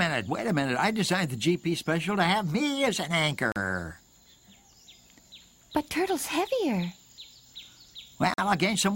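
The sound drops to silence for about 40 ms at 3.52 to 3.56 s and about 44 ms at 8.34 to 8.38 s, then resumes. These are likely Bluetooth stalls, where interference delayed packets until the headphones' buffer emptied and playback paused awaiting retransmission.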